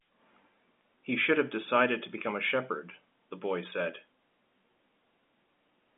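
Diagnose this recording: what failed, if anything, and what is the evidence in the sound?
A single bit flipped in one sample on the digital path or in storage: a bit error spike at 0.81 s. That sample jumps by a power of two and snaps straight back, giving one sharp, broadband tick unrelated to the speech.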